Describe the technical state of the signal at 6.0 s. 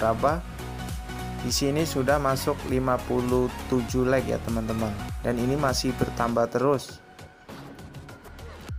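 At 6.0 s the signal is intact, with no dropout, clipping, distortion or other technical fault at that point.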